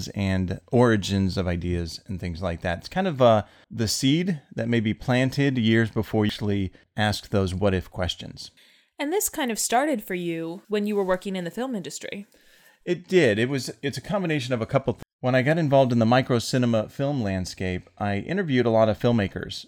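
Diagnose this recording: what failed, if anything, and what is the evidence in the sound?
Two brief glitches cut into the speech at 6.30 s and 15.03 s, each a momentary disruption of the audio. This is damaged data in a compressed stream, at the codec stage where stored or transmitted data reaches the decoder. At those points some of the encoded bytes were corrupt, so the decoder misread the affected frames, lost sync, and briefly produced garbage until it found the next valid frame header and resumed.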